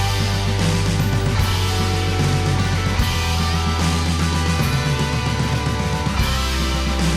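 The sending device's clock runs a few percent faster than the receiver's, so audio arrives quicker than it can be played out. This is clock drift between sender and receiver. The jitter buffer keeps filling, and the receiver repeatedly discards short slices to keep up. Throughout the clip this sounds like small skips and timing hiccups, recurring at uneven intervals rather than on a steady beat, each one a brief jump in the sound's flow.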